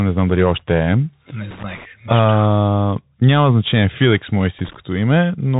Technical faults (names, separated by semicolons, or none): Bluetooth CVSD headset codec; loose connector crackle